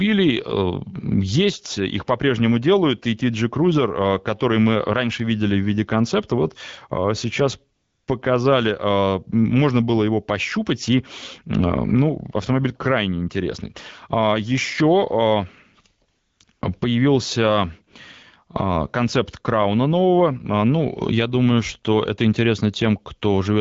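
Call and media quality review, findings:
AMR comfort noise, 7.75–8.07 s, between "концепта вот сейчас" and "показали а можно было"; again 16.09–16.39, 16.43–16.47, 16.51–16.61 s. The sender's silence detection stopped transmitting speech frames, so the receiver substituted smooth synthetic noise for the real background, which switches in and out. The wideband codec's light coding sound fits AMR-WB around 12.65 kbit/s.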